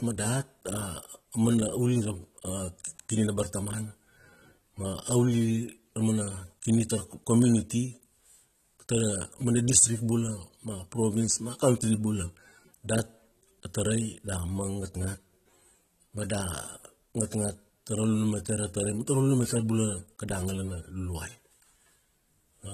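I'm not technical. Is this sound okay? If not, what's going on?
No. The whole clip sounds dull and fizzy, with nothing above 14.1 kHz. This is likely heavy AAC compression squeezing the speech to save space.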